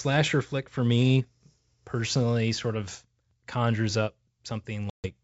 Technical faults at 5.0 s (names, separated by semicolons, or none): packet loss on an ADPCM call